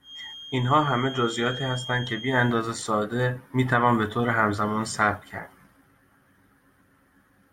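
From the start of the clip to 2.61 s, a feedback whistle sits behind the speech. It is a thin, steady tone at 3.2 kHz, roughly 15 dB below the speech. Its level swells and fades slowly but never builds up. The likely cause is a loudspeaker-to-microphone loop held just at the edge of feedback. One high frequency keeps ringing around that loop without running away. At 2.61 s the whistle stops.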